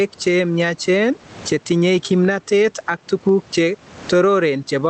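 Gain pumping runs through the whole speech clip. The gain swings by around 15 dB. That is likely caused by the input gain being set far too high, with a fast limiter or compressor clamping down on each loud onset. Loud and quiet passages sit unnaturally close together, so the delivery sounds squashed. The room noise itself sits about 37 dB below the speech. The audio also shows the coding texture of a call codec, with content ending around 8 kHz, consistent with Opus at roughly 20 kbps.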